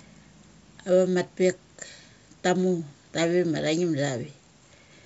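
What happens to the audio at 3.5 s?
Nothing goes wrong at 3.5 s: the speech there is intact, carried by 64 kbit/s G.722 wideband coding with at most a faint upper-band hiss.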